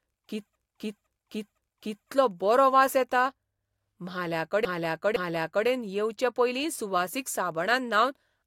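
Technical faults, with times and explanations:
0.55–2.09 s, repeated frames: the same 512 ms block plays four times in a row just before "बरो वास येता", adding about 1.5 s.
4.65–5.67 s, repeated frames: a 512 ms block plays three times, adding about 1 s. Unlike echo or a dropout, each repeat is an identical, undecayed copy that stretches the timeline rather than fading or leaving a gap.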